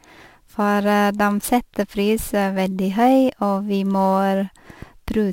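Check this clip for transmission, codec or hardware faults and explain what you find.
One hardware fault runs through the whole recording: sample clock jitter. A fine hiss and grainy roughness ride on the speech, growing on louder and brighter sounds such as sibilants and dropping away in the pauses. The converter's clock wanders by a few microseconds, so each sample is taken slightly early or late. Where the waveform changes fastest, that timing error becomes an amplitude error, here about 30 dB below the signal.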